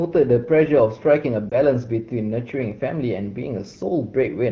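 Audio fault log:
1.49–1.58 s, lost AMR speech frame: a dip or warble, fitting one missing 20 ms frame concealed by reusing prior pitch at lower gain, not a silent gap.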